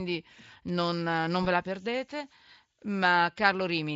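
At 1.43 to 1.47 s, VoIP packet loss concealed by the speech codec: about 20 ms of audio never arrived, consistent with a single lost packet, and the decoder filled the gap by extending the last pitch and filter shape at falling gain. The result is a brief smear of stretched, fading sound where the speech should continue, and the voice stays weak or distorted for a moment as the decoder recovers. Around it, the Speex coding sounds clean or nearly so, suggesting a high-quality setting.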